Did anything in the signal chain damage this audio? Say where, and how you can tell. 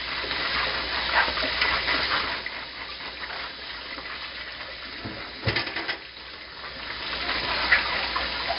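Yes. 4-bit ADPCM compression damages the codec stage throughout the clip. Each sample is coded as a coarse 4-bit step from a predicted value, so the quantisation error rides on the signal as a heavy, gritty hiss that swells with every loud passage, and sharp onsets smear because the adaptive step size lags. Nothing is heard above 5.3 kHz, and the dull top, together with the grit, points to a rate near 44 kbps. The smooth fader-like level moves pass through the same grit.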